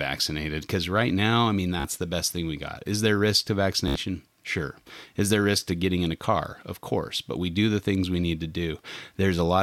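A brief machine-gun buzz at 1.80–1.85 s, after "right now i mean" and before "the best thing we", and again at 3.88–3.96 s, after "is there risk to", is Bluetooth stutter: lost packets made the receiver replay its last short slice, dropping about 44 ms and 73 ms of speech.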